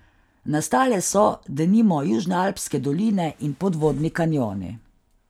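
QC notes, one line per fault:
No faults detected.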